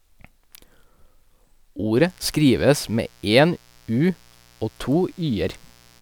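It's a speech recording, and from about 1.93 s right through to the end there's a mains buzz riding under it. It's a steady, raspy edge built on 60 Hz, with harmonics stacked up into the low kilohertz, sitting roughly 35 dB below the speech. That gritty quality comes from sharp spikes getting in twice per mains cycle, the sort of thing a dimmer, a rectifier or a missing shield on the line lets through.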